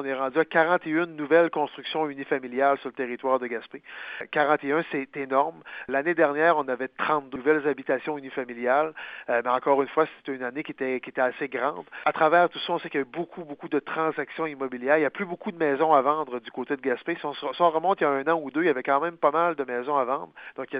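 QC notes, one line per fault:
No faults found in this clip.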